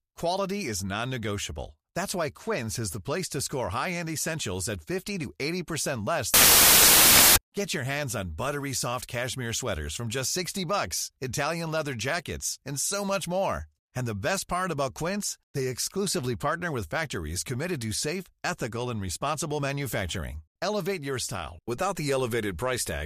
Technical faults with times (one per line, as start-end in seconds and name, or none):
6.34-7.37 samples built from the wrong bytes